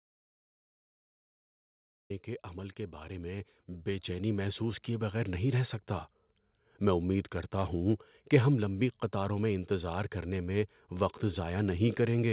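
From the very start until 2.1 s the clip is in an audio dropout to silence: plain silence with no room tone, so it is not a pause. Speech then starts abruptly on "کے عمل". This likely comes from the input being lost while recording carried on. Between 2.99 and 5.4 s, automatic gain rising lifts the level by about 9 dB. The speech and the background noise swell together, which shows it is the gain control and not the speaker getting louder. Throughout, nothing reaches above 4 kHz, which fits the narrowband G.711 call path.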